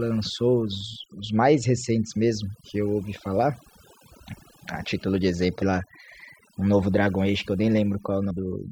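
Across the whole speech clip there is overdone noise removal. The reducer cuts narrow frequency bands whenever they approach its noise estimate, taking quiet speech detail with them, so the background drops and breaks into twinkling specks.

Compressed frames are skipped at 5.62 s and 8.30 s. The audio jumps ahead by roughly 0.3 s at the first point and roughly 0.15 s at the second, consistent with whole 32 ms frames going missing.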